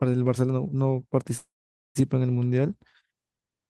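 Speech with a call audio freeze at 1.37–1.97 s: the sound stretches into a fading buzz, then goes silent for about half a second, likely an emptied jitter buffer. Speech resumes late, nothing lost.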